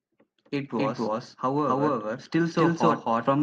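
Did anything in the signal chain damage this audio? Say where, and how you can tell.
Yes. A doubled audio track runs through the whole clip. Every part of the speech is followed by a second, full-band copy at about the same level, trailing by roughly 300 ms, with no decay or room colouring to suggest an acoustic echo. Because the repeat is a clean duplicate at a fixed offset, this is likely a routing fault at the driver or buffer stage, with the signal captured twice by a second, slower path and mixed back in.

An automatic gain rising fault sits in the call-processing stage. From 0.52 s to the end of the clip, the speech and the background noise floor swell together gradually rather than jumping. That joint rise shows the change is a gain applied to the whole signal, not a change in how loudly anyone spoke. The automatic gain control judged the input too quiet and kept raising its gain over the rest of the clip.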